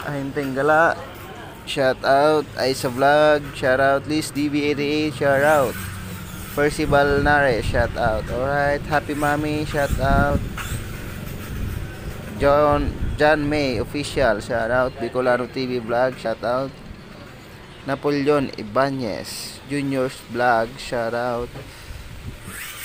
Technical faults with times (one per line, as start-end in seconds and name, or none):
4.35 audio missing between chunks
16.25 audio missing between chunks